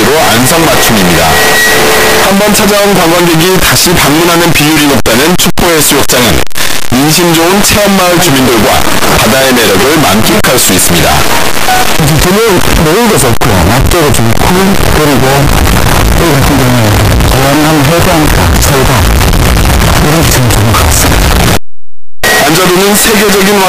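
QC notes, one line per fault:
throughout, signed and unsigned mixed up: 8-bit samples were likely read with the wrong sign convention, flipping the top bit, so every zero crossing jumps full range and quiet passages blare as harshly as loud ones.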